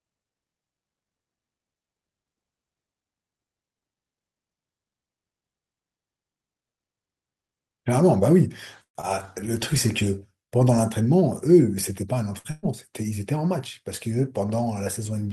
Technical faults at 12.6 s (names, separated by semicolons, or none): burst of packet loss